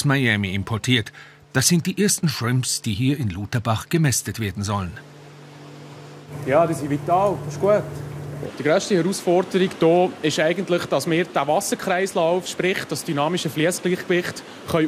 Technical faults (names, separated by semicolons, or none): none